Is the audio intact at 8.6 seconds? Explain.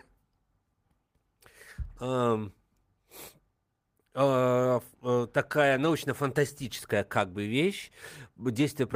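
Yes, the audio is intact at 8.6 seconds, with the speech continuing there without any audible fault.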